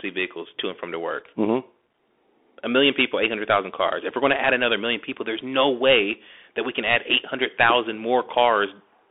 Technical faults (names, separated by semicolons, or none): Bluetooth CVSD headset codec